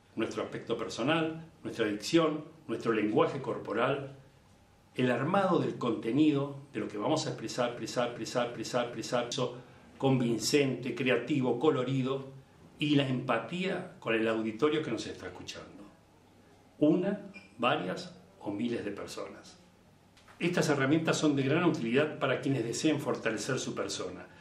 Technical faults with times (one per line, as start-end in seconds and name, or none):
7.77-9.32 broken-record loop